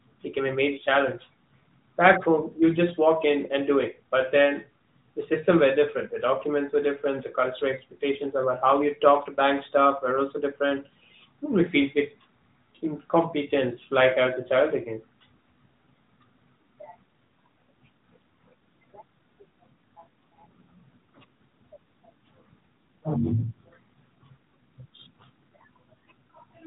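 Nothing stood out as a technical fault on listening to this speech clip.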